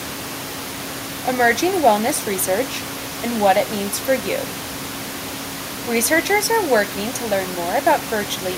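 The speech signal shows no technical faults, and the only background sound is the room's own noise, sitting about 14 dB below the speech.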